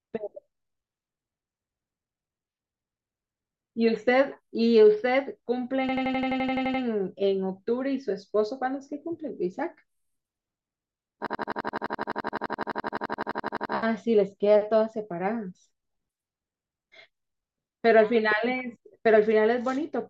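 At 5.89 s the speech freezes into a system hang loop lasting until 6.83 s. The same 85 ms fragment repeats about eleven times at 11.7 Hz, which fits a stalled 4096-sample ring buffer, giving a machine-gun stutter. It returns from 11.26 to 13.74 s for 29 repeats. A waveform shows one identical shape tiled end to end, and a spectrogram shows a single slice stamped in vertical stripes every 85 ms. Speech resumes with little or nothing skipped.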